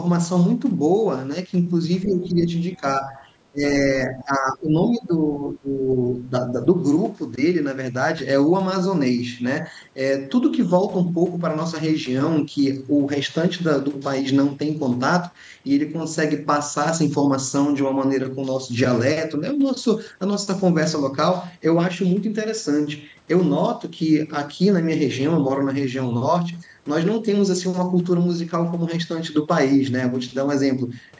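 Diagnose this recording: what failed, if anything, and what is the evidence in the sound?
Call processing stage: the speech dips in short bursts at 2.04, 2.77, 3.51, 4.07, 4.88, 5.45, 6.14 and 6.51 s. The drops are roughly 5 to 25 dB and deepest near 3.5 s. This is likely speech suppressed in double talk, where the echo canceller turned down the near talker along with the echo.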